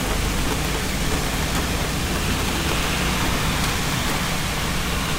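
Sample clock jitter runs throughout: an unstable converter clock, wandering around 10 microseconds, leaves a gritty hiss roughly 15 dB below the sounds, swelling on loud, bright moments.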